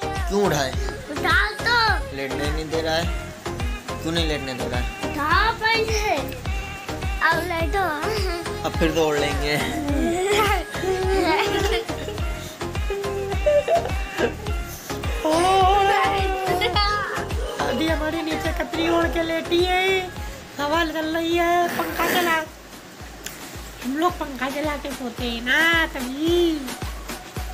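No technical faults are audible.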